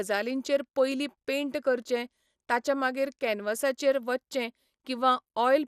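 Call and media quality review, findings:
Dull, gurgling, granular speech throughout, plainly audible; nothing above 14.4 kHz. Likely MP2 compression: too few bits per sub-band, so upper bands switch off and the remaining bands flicker and are coarsely quantised. Damage level fits roughly 80 kbps.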